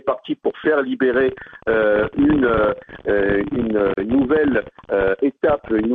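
Two separately encoded pieces were joined without trimming the encoder's start delay and end padding, leaving a gap at the join of encoded pieces: a 34 ms gap from 3.94 to 3.97 s, with smeared edges, before the sound resumes where it stopped.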